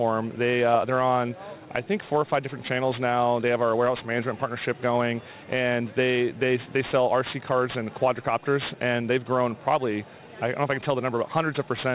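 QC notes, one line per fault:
Throughout: aliasing. The audio was brought down to a rate that fits 8 kHz without a proper anti-alias filter, so content above 4 kHz folds back as unrelated, metallic tones roughly 20 dB below the signal. Unlike plain band-limiting, which only dulls, this adds grit right up to the band edge.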